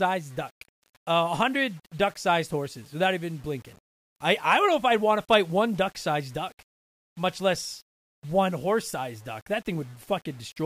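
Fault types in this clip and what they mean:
Low bit depth without dither: the speech has a gritty, grainy edge that tracks the voice, with error about 30 dB down, likely from plain rounding to something like 8 bits.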